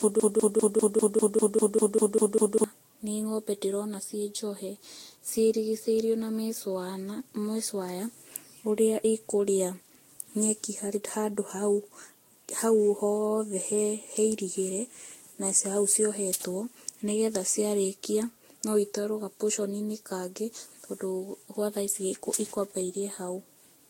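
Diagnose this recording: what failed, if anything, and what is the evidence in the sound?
The audio is smeared, swirly and hollow throughout, with blurred attacks and nothing above about 16.7 kHz. That points to the codec stage. The likely cause is generation loss from re-encoding with Vorbis many times, perhaps seven, at around 62 to 65 kbit/s, with quantisation noise and spectral holes building up. A single encode at that rate would sound cleaner.

Playback or streaming has a broken-record loop already under way when the clip opens. A fragment of about 0.2 s (198 ms) repeats exactly, back to back, about a dozen times until 2.64 s, just before "nĩ ngombe ndĩrona ciĩ". The likely cause is a stalled player or stream resending its last buffer, and the audio for that span is lost. The repeats are identical, so this is not an echo.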